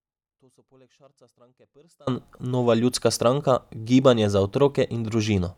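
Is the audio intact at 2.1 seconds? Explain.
Yes, but only just. An audio dropout to a faint residue is already under way when the clip begins and lasts until 2.07 s, when the speech snaps back in mid-flow. Through that stretch the wanted signal is missing and only a faint leak remains, about 40 dB below normal level, likely because the signal was lost while the path after the break stayed live. That residue sets it apart from a dropout to digital silence, and the abrupt return at 2.07 s sets it apart from a fade.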